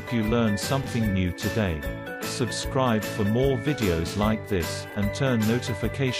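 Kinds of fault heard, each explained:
Chunks out of order: a short block of audio plays one slot later than it should, so it lands after the block that was meant to follow it. Two such swaps occur, at 0.81–0.86 s and 4.90–4.95 s, each spanning two blocks of about 23 ms, which fits a 1024-sample buffer at 44.1 kHz. Each sounds like a brief jumbled flick, with three hard joins. Unlike a dropout or a repeat, nothing goes silent and nothing plays twice.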